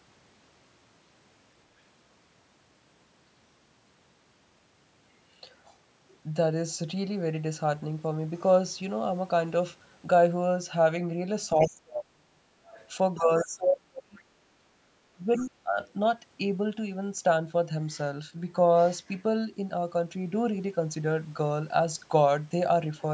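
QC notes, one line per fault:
11.53 to 12.42 s and 13.15 to 15.79 s: speech suppressed in double talk. The talker's level dips by roughly 30 to 35 dB, under a second in the first stretch and about a second and a half in the second. The likely cause is an echo canceller that could not separate the talker from the loudspeaker echo and pulled both down.
11.6 s, 12.72 to 13.46 s, 14.15 s and 15.36 to 15.9 s: other side's voice leaking through. A second voice comes through faintly. The two short scraps at 11.6 and 14.15 s last about 60 ms each, and the longer stretches last over half a second. It sits roughly 20 to 30 dB below the talker. The likely cause is the far end playing on a loudspeaker and the echo canceller leaving some of it in the microphone.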